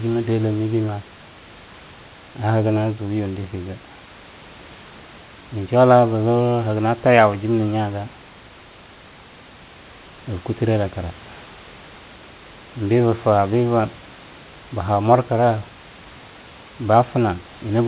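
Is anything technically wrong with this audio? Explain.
No, nothing is technically wrong with this audio.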